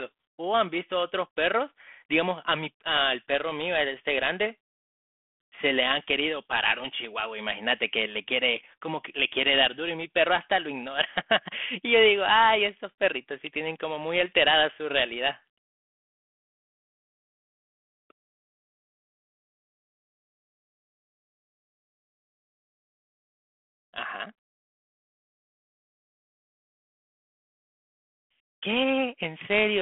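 No technical faults are audible.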